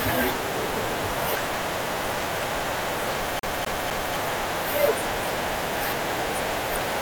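A fast, even stutter breaks up the speech from 3.39 to 4.16 s, where the same 255 ms slice plays three times with short mutes between. It is the classic CD stuck on one turn, with a scratch bouncing the laser back one track each rotation.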